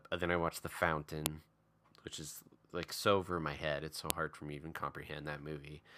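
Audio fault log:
1.26 s and 4.10 s, file header played as audio: two sharp, loud clicks cut through the speech, each over in about a millisecond. That's what you get when separate WAV pieces are butted together or streamed without stripping their headers, so a few dozen bytes of header data get read as sample values. They don't relate to the waveform around them, so each new piece opens with a hard snap no matter what the speech is doing at that moment.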